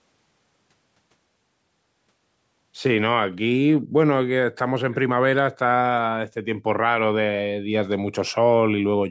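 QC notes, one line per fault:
3.77–3.81 s echo leak: a very faint scrap of speech returns 390 ms late, likely loudspeaker pickup the far end's echo canceller didn't fully remove.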